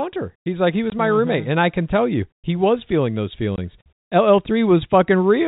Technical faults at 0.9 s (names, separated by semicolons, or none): packet loss filled with silence